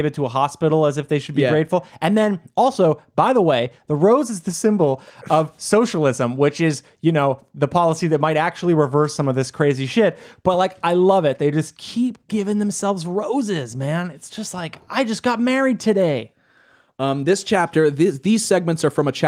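No technical faults are audible anywhere in the speech recording.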